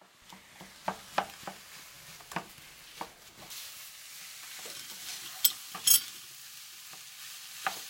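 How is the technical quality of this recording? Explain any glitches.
The first 3.5 s is clean, but the rest has a tonal fault. From 3.50 s to the end, pre-emphasis is left on. The treble was boosted for recording or transmission and never cut back. Highs sit about 11 dB above 1 kHz at 10 kHz, which fits a J.17 curve. The sound turns thin, bright and hissy.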